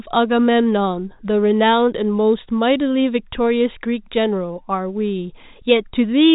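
No technical faults are audible anywhere in the speech.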